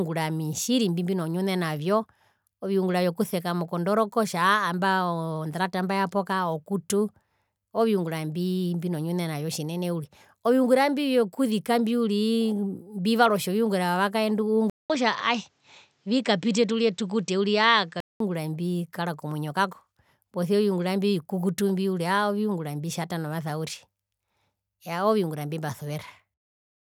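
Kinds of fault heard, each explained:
Input switched to a poorer device: from 14.70 to 18.20 s the speech turns duller, with nothing above 8.2 kHz, a 200 ms silence at the switch, faint new background noise well below the speech and no real level jump, likely from the input moving to a narrower-band microphone.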